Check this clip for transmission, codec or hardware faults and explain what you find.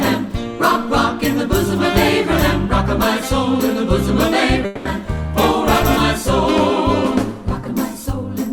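One transmission fault is present. From 4.65 to 4.87 s, a long network dropout produces a 200 ms fading buzz, likely the receiver concealing missing packets. The audio then resumes with that part lost.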